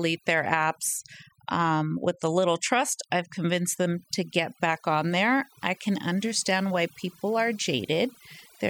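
From start to finish the speech carries overdone noise removal: the noise reduction was set too aggressively, switching off individual frequency bands that sit near its noise estimate. The gaps fall to near silence with twinkling specks, and quiet parts of the voice are cut away along with the noise.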